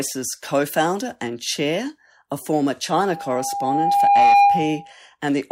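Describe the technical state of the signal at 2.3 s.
At 2.3 s the speech signal is intact, with no audible fault at that moment.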